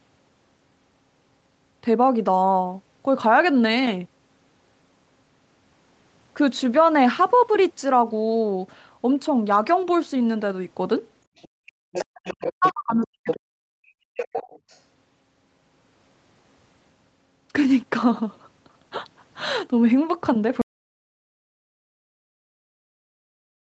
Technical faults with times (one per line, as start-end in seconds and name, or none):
11.36-11.48 other side's voice leaking through
11.48-11.75 background gated by the echo canceller
11.92-12.73 other side's voice leaking through
12.03-14.35 speech suppressed in double talk
13.29-13.40 other side's voice leaking through
14.18-14.80 other side's voice leaking through
20.61-23.74 audio dropout to silence